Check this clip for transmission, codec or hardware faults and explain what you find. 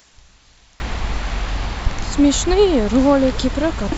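One fault turns up, in the opening 0.8 s.

From 0.0 to 0.8 s the speech falls by about 30 dB and nearly vanishes in mono. The likely cause is one channel inverted: the shared centred sound cancels when both sides are summed. The waveform is almost flat there, and the spectrogram is nearly empty.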